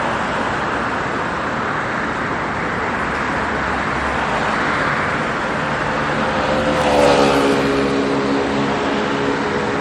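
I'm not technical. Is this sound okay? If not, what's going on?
No. Throughout, the sound is swirly, hollow and smeared, with nothing above 16.5 kHz. This is likely generation loss from saving as MP3 about four times over.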